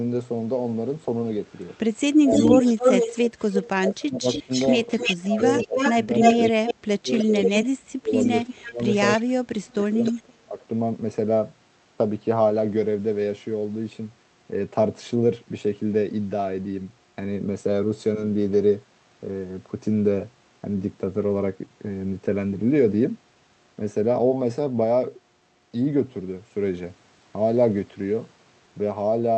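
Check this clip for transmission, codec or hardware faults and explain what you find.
The clip is speech carrying two related faults from a loudspeaker-side echo canceller: echo leak and speech suppressed in double talk.

Echo leak runs from 1.53 to 8.94 s, with a shorter return from 10.03 to 10.22 s. A copy of the speech arrives 300 ms late in the first stretch, at roughly the same level as the original, and 307 ms late in the second, about 10 dB quieter. The likely cause is a far end playing the call on a loudspeaker whose canceller failed to subtract the microphone pickup and sent the remainder back.

Speech suppressed in double talk appears at 2.16–2.32 s, 3.79–4.50 s, 5.05–5.76 s and 6.49–10.57 s, all overlapping the echo. The level drops sharply in pieces, by roughly 20 to 25 dB in the first three and about 30 dB in the last, where around two seconds in total are affected. This is likely the canceller mistaking simultaneous talk for echo and attenuating both, which chops and ducks the talker.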